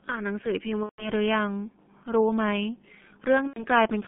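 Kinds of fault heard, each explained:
G.723.1 codec: the whole clip runs through this low-rate telephony codec at 6.3 kbit/s in 30 ms frames. Speech is confined to roughly 150 Hz to 3.4 kHz, so it sounds muffled and hoarse, with smeared consonants from the coarse, slowly updated voice model.
VoIP packet loss concealed by the speech codec: from 0.83 to 1.11 s and from 3.47 to 3.65 s, about 150 ms and 90 ms of packets went missing. The decoder stretched its last pitch and filter into a fading buzzy tone or coloured noise, and the speech stays weakened briefly afterwards.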